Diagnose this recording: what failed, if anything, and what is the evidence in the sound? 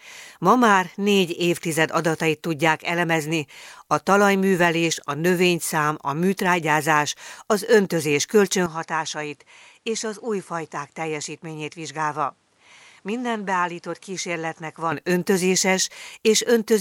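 From 8.66 to 14.92 s, after "a műtrágyázás az öntözés", nothing passes above 11.4 kHz. Level drops about 5 dB. Faint new noise appears. Likely an input switched to a poorer device at the driver.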